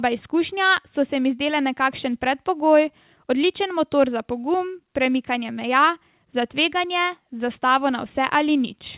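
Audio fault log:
No faults are audible in this speech clip. It has passed through a WebRTC call path, and nothing above 4 kHz survives, which fits G.711 A-law telephone coding at 64 kbps.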